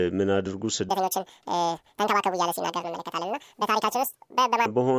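From 0.89 s to about 4.66 s the speech runs at exactly twice the speed and an octave high, chipmunk-style. That's a wrong sample rate: the samples go out unconverted at double the rate they came in, which fits 16 kHz audio played at 32 kHz.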